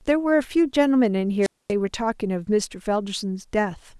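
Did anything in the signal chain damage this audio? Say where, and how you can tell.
Yes. At 1.41 s hiss rises, then 240 ms of near silence until 1.72 s: a wireless microphone squelch dropout, the receiver muting a fading radio signal.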